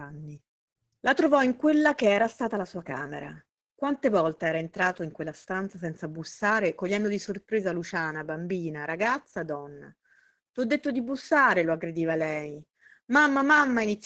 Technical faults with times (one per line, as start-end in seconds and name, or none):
0.00-14.05 Opus voice compression